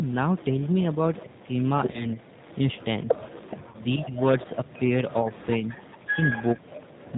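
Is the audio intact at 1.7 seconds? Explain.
No. At 1.7 seconds three faults overlap.

The G.729 codec runs through the whole clip. It rebuilds speech at 8 kbit/s from a vocal tract model, a pitch predictor and a few pulses per frame, so the voice sounds rough and slightly synthetic, with nothing above 4 kHz. That hard ceiling and the rebuilt, buzzy texture set it apart from simple band-limiting or a noisy line, where the speech itself would not sound machine-made.

An echo leak runs from 0.05 to 7.16 s, so it covers this moment. A faint copy of the speech, about 25 dB below the main voice, trails it by roughly 430 ms. The likely cause is a loudspeaker on one side whose echo canceller let part of the pickup return. Unlike room reverberation, which smears sound continuously, this is a distinct delayed repeat at a fixed lag.

Speech suppressed in double talk also spans this point, from 0.97 s to the end. 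When both sides talk at once, the canceller ducks the talker along with the echo, which is likely what is happening here. The voice dips by up to about 20 dB, loses its top or breaks into pieces for around a second in total. The gaps follow the overlap in talking rather than the regular timing of network packet loss.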